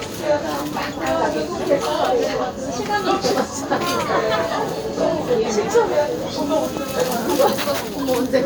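No technical faults can be heard anywhere in this recording of sounds, so there is nothing to place in time order.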